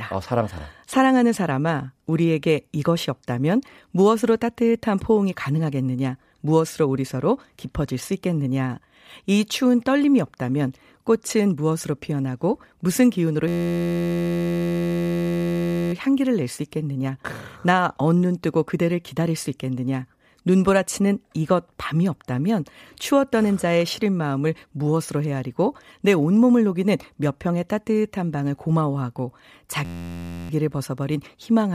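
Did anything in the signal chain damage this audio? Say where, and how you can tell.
Yes. A system hang loop at the driver or buffer stage struck twice, from 13.48 to 15.93 s and from 29.85 to 30.50 s. In both, the sound turns into a steady buzz at 86.1 Hz, because the hardware kept replaying the same 11.61 ms slice, which fits a 512-sample buffer. The waveform shows one identical short cycle tiled end to end, and the spectrogram shows flat horizontal harmonics spaced 86 Hz apart. Little or no audio is lost around either event.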